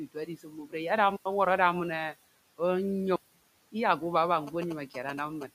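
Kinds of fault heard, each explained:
Speech cut by the noise suppressor: Between 0.14 and 0.74 s, parts of the speech sound swallowed and faint, dipping by about 15 dB over roughly a fifth of a second in total. The suppressor mistook these quieter speech sounds for background noise and turned them down.
Block of digital silence: The sound cuts abruptly to dead silence. This happens for 92.88 ms at 1.16 s and for 185.76 ms at 3.16 s, just before "iyakke baba". The output buffer likely went unfilled, which fits blocks of 4096 and 8192 samples.
GSM signalling bursts: After "iyakke baba", from 4.47 to 5.43 s, a galloping dit-dit-dit of short buzzes repeating at 216.7 Hz sits only a little below the speech. The audio circuitry rectified radio bursts from a nearby 2G phone while it was signalling.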